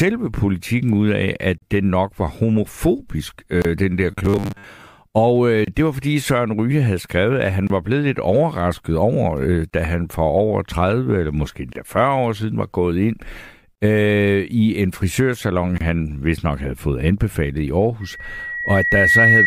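It's a speech clip with three separate problems. There's a gap at a join of encoded pieces every 2 s, at 1.58, 3.62, 5.65, 7.67, 9.70, 11.73, 13.75 and 15.78 s. The first is about 39 ms and the rest about 27 ms, short silences where untrimmed encoder delay and padding sit between chunks. From 4.12 to 4.64 s the speech goes into a rigid metallic buzz at 100 Hz, likely robotic sound from repeated short buffers: a 10 ms chunk looped while most of the real audio in that stretch is skipped. Then at 18.01 s a loudspeaker feedback squeal at 1.9 kHz swells over about a second and runs to the end, sitting about 5 dB above the speech as the mic-to-speaker loop runs away.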